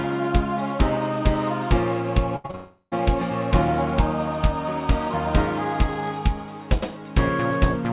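At 2.36 s a burst of packet loss begins and runs to 2.46 s. About 80 ms of audio never arrives, and the receiver covers the gap by carrying the last sound forward for roughly 79 ms while fading it, so it is heard as a held, dimming buzz or hiss. It differs from a brief concealment by its length: about 80 ms of synthetic tail is long enough to register as something sustained, not a blip.

Two short concealed packet losses follow immediately, from 2.46 to 2.51 s and from 2.51 to 2.55 s. The first drops about 40 ms and fills 30 ms. The second drops about 20 ms and fills 23 ms. Each patch is only a few hundredths of a second, so instead of a held buzz they come across as a quick smear or wobble where the decoder blends back toward real audio. That shortness separates them from the burst just before.

From 2.55 to 2.99 s comes a long network dropout, likely caused by the connection stalling. 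About 360 ms of audio is lost. The concealment stretches the last sound for roughly 362 ms as a fading buzz or hiss, and then about 40 ms of plain silence follows before sound returns further along, with the lost stretch simply gone. That extended fade ending in true silence is what marks it apart from the shorter burst. All of this rides on a G.711 A-law call path at 64 kbps, with nothing above 4 kHz.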